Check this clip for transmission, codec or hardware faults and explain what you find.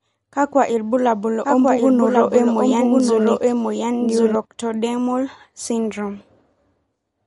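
Two faults are audible: lossy-codec damage through the whole clip and a doubled copy of the audio for about three seconds.

MP3 compression, throughout: nothing sounds above about 11.2 kHz, and the speech has a plainly audible watery, swirling quality, which points to an encoder starved of bits, likely MP3 at a low rate around 48 kbps. To save data it cuts the treble at a fixed frequency and zeroes weak frequency lines, which flicker on and off between frames. This leaves s sounds metallic and smears consonant onsets.

Doubled audio track, from 1.45 s to 4.35 s, just after "kakwa ilbulabul": a second full-band copy of the speech runs about one second behind the original and at roughly the same loudness. It is likely caused by a second, slower capture path or an edit that left two unaligned copies in the mix. The copy has no decay or room colour, and it starts and stops abruptly.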